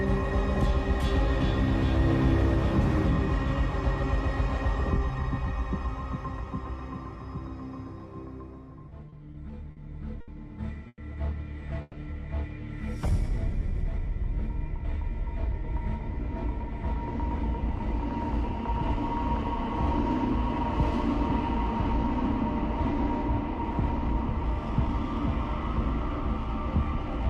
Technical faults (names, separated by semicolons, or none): repeated stalls (stutter); call audio freeze; jitter buffer slow-down; jitter buffer speed-up